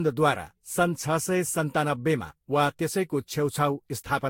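Throughout, the speech sounds swirly, smeared and hollow, with blurred attacks and nothing above 16.6 kHz. This likely reflects generation loss from repeated Vorbis encoding, roughly four passes.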